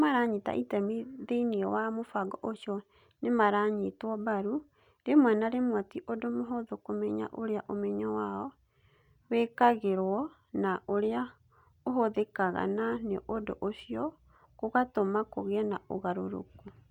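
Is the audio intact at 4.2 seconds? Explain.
Yes, the speech at 4.2 seconds is intact, with no dropout, click or other fault at that moment.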